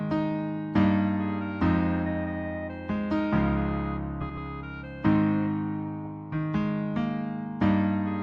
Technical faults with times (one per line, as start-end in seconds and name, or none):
4.21-4.38 frames out of order